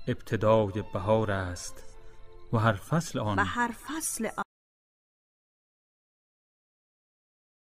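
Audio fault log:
4.43 s to end, audio dropout to silence: the input was likely lost while recording continued, writing only silence, so the sound cuts abruptly into dead silence with no room tone.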